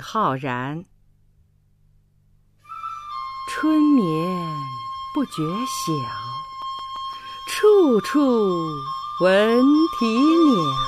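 The audio carries CD scratch ticks from 6.45 s to 7.30 s. Six short ticks arrive in that span, at roughly seven per second. Each is very brief, a few milliseconds at most. The regular spacing points to a single scratch or blemish passing under the laser once per turn of the disc. At each pass the damage exceeds what error correction can rebuild. The player then fills the gap by interpolating or muting, which leaves a tick.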